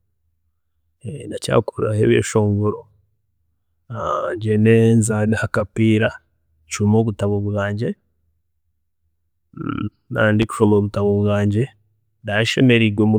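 At 10.42 to 10.45 s, just after "naaba ndi", a single loud pop about 10 dB above the speech, likely a voltage spike from a switch or static, sits over the continuing speech.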